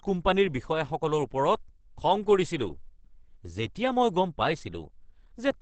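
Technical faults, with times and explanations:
Throughout, Opus compression: the speech sounds muffled and hoarse, with plainly audible coding damage. Nothing is heard above 8.6 kHz. The likely cause is Opus running in its speech mode, which models the voice coarsely. The narrow band fits wideband coding near 16 kbps.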